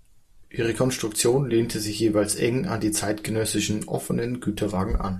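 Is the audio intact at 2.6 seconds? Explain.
Yes, the speech at 2.6 seconds is intact, with no audible fault at that moment.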